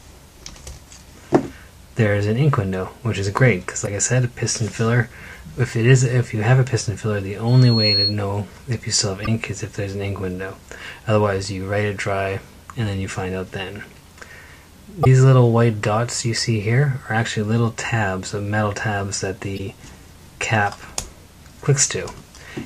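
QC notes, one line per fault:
3.83 s, 9.23 s, 15.01 s and 19.55 s: damaged data in a compressed stream. Each event lasts about 50 ms and is heard as a short chirp or blip. The decoder hits corrupted frames, cannot parse them, loses sync and jumps to the next valid frame header. On a spectrogram each shows as a narrow vertical smear of broadband energy. On the waveform there is a small discontinuity at each event.
7.47 to 8.16 s: loudspeaker feedback squeal. A single tone at 4.3 kHz swells over roughly 0.4 s and peaks at about 5 dB above the rest of the sound before it stops. A microphone was picking up its own loudspeaker, and the loop gain at that frequency exceeded one, so the tone fed itself and kept growing. On a spectrogram it is one bright horizontal line that brightens as it rises. On the waveform the envelope climbs steadily over the first 0.4 s.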